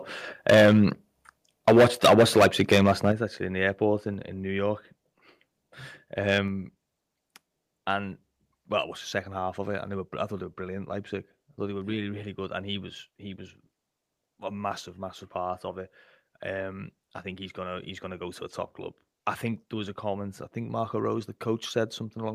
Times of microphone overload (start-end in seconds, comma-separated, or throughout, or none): 0.49-0.85, 1.67-3.09, 6.31-6.37